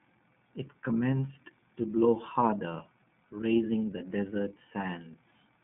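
From start to end the speech carries the sound of the iLBC codec, and the damage is plainly audible. The band runs from about 150 Hz to 3.5 kHz, so it sounds thin and boxed in. The coding is rough and slightly synthetic, consistent with 30 ms frames at 13.33 kbps, each coded without help from the one before. On a spectrogram, energy stops in a hard ceiling near 3.5 kHz, with blurred, grainy harmonics beneath.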